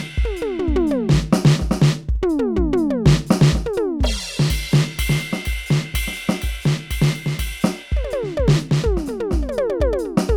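No technical faults occur at any point in the music, so there is nothing to describe in time order.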